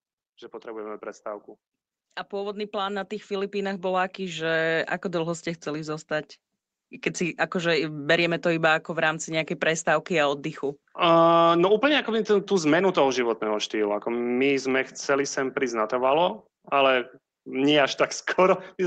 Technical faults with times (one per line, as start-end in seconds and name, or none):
2.30-4.55 automatic gain rising